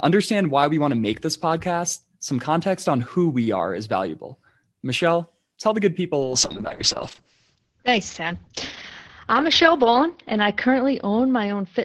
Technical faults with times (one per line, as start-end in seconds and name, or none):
6.20-11.84 call bitrate drop